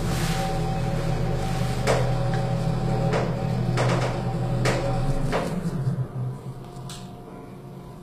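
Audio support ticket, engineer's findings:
Treble gritty and metallic throughout, harmonics misaligned above the crossover, nothing above 14.9 kHz. Likely HE-AAC compression: spectral band replication copying lower bands upward under a coarse envelope, consistent with a low bitrate around 24 kbps.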